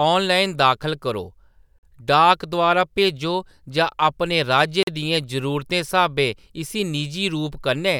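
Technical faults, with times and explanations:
1.79–1.83 s and 4.83–4.87 s, gap between chunks: after "ऑनलाइन दाखल करो" and again after "भेजो जां अपने राज्य", the speech halts for 44 ms, 3.0 s apart, at each join between chunks. Nothing is lost. The waveform shows flat, hard-edged silences, and the spectrogram shows blank vertical strips.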